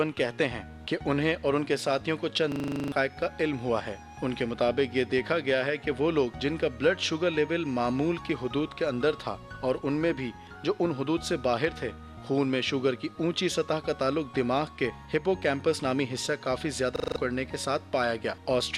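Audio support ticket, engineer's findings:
System hang loop at 2.52 to 2.92 s and 16.96 to 17.16 s. Host or driver stalled while the audio device kept replaying its ring buffer. One 40 ms slice repeats 10 times, then 5, at 25 Hz, losing about 0.4 s and 0.2 s of audio.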